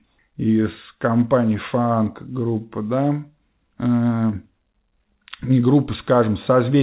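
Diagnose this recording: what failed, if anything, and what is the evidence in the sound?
Nothing failed; the call path carries the speech normally.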